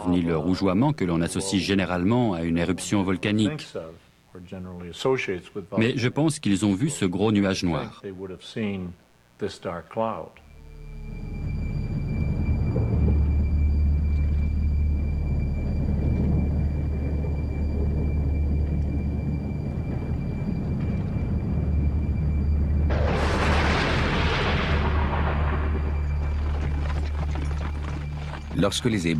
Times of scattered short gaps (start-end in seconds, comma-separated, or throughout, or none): none